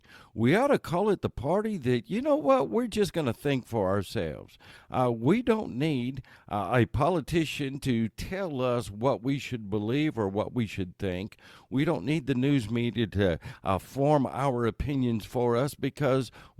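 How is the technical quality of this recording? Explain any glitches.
The technical quality of the recording is good, and there are no glitches to explain.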